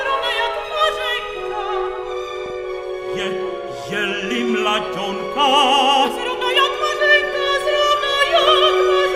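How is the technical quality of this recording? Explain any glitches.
The recording is marred by DAB burbling in three short bursts, at 2.37 to 2.50 s, 5.10 to 5.21 s and 8.25 to 8.49 s. Weak reception lets a small fraction of bit errors slip past error correction into the MP2 data, so wrong scale factors make individual sub-bands jump in level for up to a frame, and wrong samples corrupt the audio. The result is short blips of noise in single sub-bands. On a spectrogram it shows as scattered rectangular blocks, and the waveform shows brief irregular spikes.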